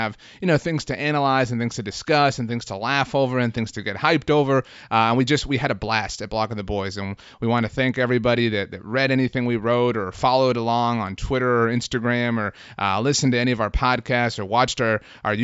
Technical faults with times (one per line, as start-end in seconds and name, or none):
none